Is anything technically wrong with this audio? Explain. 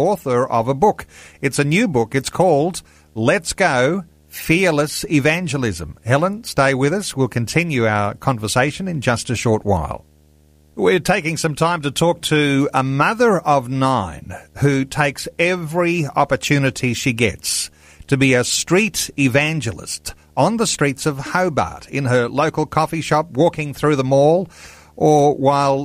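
Yes, there's video or display buzz running through the whole speech clip. A screen or its video cable is leaking into the audio path, and the interference arrives at the picture's field rate, here 75 Hz, so you get a steady low buzz with a fizzy hash riding on top of it. It sits roughly 35 dB under the speech, so it's quiet.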